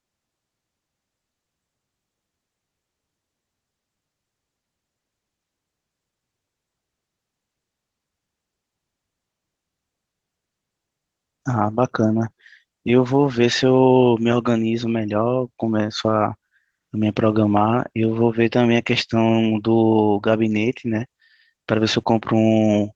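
Opus voice compression runs throughout, with SILK coding the lower band and a CELT layer above 8 kHz at a rate that sounds like roughly 16 kbps. The coarse excitation coding leaves the speech plainly hoarse and slightly robotic.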